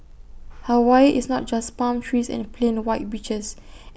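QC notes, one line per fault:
No fault stood out on listening to this speech recording.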